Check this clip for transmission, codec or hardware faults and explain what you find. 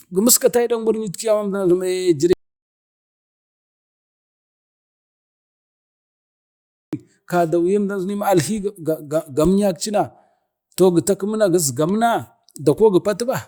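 One fault is present: an audio dropout to silence from 2.33 s to 6.93 s, about 4.6 s lost. The speech cuts off mid-flow and returns mid-flow, with nothing in between. The gap is silent, with no room tone or hiss, which sets it apart from a natural pause or a noise gate closing. The input was likely lost, through a disconnect, a failed link or a mute, while recording carried on writing silence.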